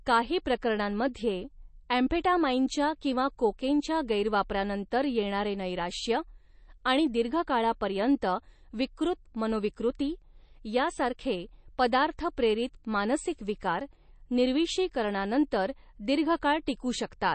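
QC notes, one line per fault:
throughout, MP3 compression: The speech sounds watery and swirly, with a metallic, chirpy edge on s sounds and softened consonant attacks, and nothing is heard above 8.3 kHz. The likely cause is heavy MP3 encoding at a low bitrate, perhaps around 32 kbps. Short of bits, the encoder cut the treble at a fixed point and dropped quieter frequency lines, which flicker in and out from frame to frame and leave the damage plainly audible.
2.10 s, pre-echo: A brief hiss rises just ahead of a sharp attack, and the attack itself lands soft and smeared instead of crisp. The hiss spreads about 13 ms before the onset. The codec spreads its quantisation noise evenly across each block. Because this attack falls late in its block, noise sized for the loud moment also fills the quiet gap just before it and is heard as a wash leading into the attack.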